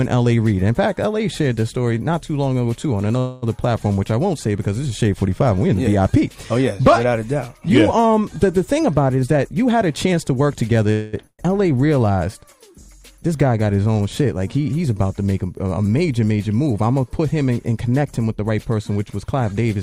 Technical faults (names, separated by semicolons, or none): call audio freeze; jitter buffer speed-up; burst of packet loss